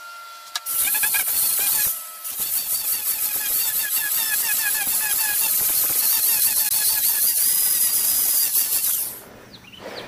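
At about 6.69 to 6.72 s there's a brief spot of damaged data in the compressed stream, lasting roughly 28 ms. Some of the encoded bytes there got corrupted, so the decoder couldn't make sense of those frames, lost its footing and had to hunt for the next valid frame header before it could pick up again. What you hear is a very short disruption in the sound right at that point, a quick glitch lasting just that moment.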